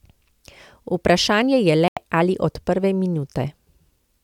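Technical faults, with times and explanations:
1.88–1.97 s, Bluetooth stall: speech cuts to silence for 87 ms before "ali od prve", likely an emptied headphone buffer awaiting delayed, resent packets.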